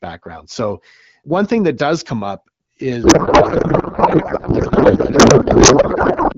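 From 3.03 s to 6.34 s a codec payload misread replaces the speech with garbled noise and warble that barely tracks it, likely from octet-aligned AMR-WB frames parsed as bandwidth-efficient. On a spectrogram the harmonics dissolve into smeared broadband texture, and the waveform envelope stops following syllables.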